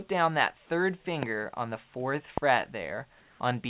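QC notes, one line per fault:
1.23–1.25 s and 2.38–2.40 s, loud pop: two single sharp pops, roughly 15 and 20 dB above the sound, which carries on beneath them. They are likely voltage spikes, such as a switch or static discharge, and are distinct from dropout clicks because nothing is missing.
3.2–3.4 s, comfort noise in place of the background: for 200 ms the textured background gives way to steady, featureless hiss about 1 dB quieter. This is likely synthetic fill during a transmission pause, and unlike a gap, it is not silence.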